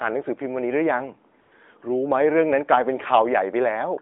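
A speech recording on a narrowband mobile line, with nothing above about 3.6 kHz and light coding damage that points to the AMR-NB codec near its top rate of 12.2 kbps. From 1.42 to 1.52 s the real background drops out and a smooth, steady hiss takes its place for 100 ms before the line returns. This is AMR comfort noise: the sending phone judged the talker silent, stopped transmitting speech frames, and the receiver synthesised filler noise from a rough level and spectrum estimate.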